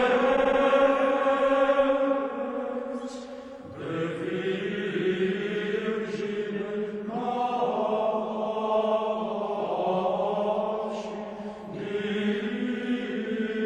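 Repeated frames occur from 0.35 to 0.59 s: a 78.4 ms block of the audio plays three extra times, producing a stutter. The block length fits a run of three compressed frames sent or written again, and the repeats add about 235 ms to the running time.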